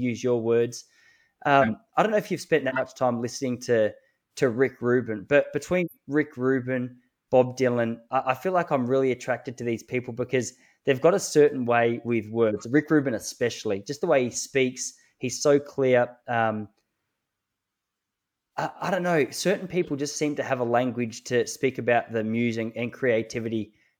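At 1.51 s, just before "I don't know if", then at 2.67 s between "know if you've spent" and "time listening to to", and again at 5.74 s, compressed frames are skipped. Each time the speech jumps forward by around 50 ms of audio, a whole number of lost frames. On a waveform the envelope changes abruptly there, and a spectrogram shows the harmonic tracks broken off and resuming out of line.

At 12.48 s, right after "a certain way with", a corrupt frame is decoded, with a few consecutive frames damaged. Misread gains and codes put energy in the wrong frequency bands, producing a burst peaking at about −15 dBFS. A second, fainter corrupt-frame burst comes at 19.83 s, spanning a couple of frames at about −30 dBFS. On a spectrogram both appear as short, frame-wide blocks of stray energy unrelated to the speech harmonics.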